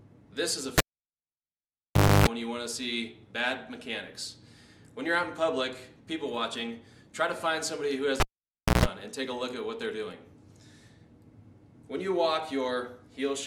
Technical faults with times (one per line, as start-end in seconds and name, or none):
0.78-2.27 cable pulled and plugged in
8.20-8.86 cable pulled and plugged in